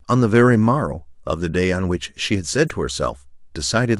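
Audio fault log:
2.67–2.71 s, corrupt frame decoded: a short, harsh blip cuts through the speech for about 40 ms, peaking near -10 dBFS. Its length fits a handful of consecutive compressed frames that were damaged yet still decoded, so misread gains and codes put energy at the wrong frequencies. On a spectrogram it shows as a brief smear or vertical streak unrelated to the harmonics around it. The waveform shows a sudden jagged spike.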